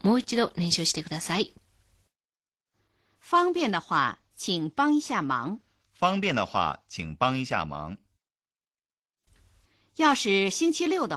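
It's a speech clip with Opus voice compression running the whole way through, and the damage is plainly audible. The voice sounds slightly hoarse and robotic, which fits a hybrid SILK-plus-CELT setup at around 16 kbps, where the excitation gets coded coarsely.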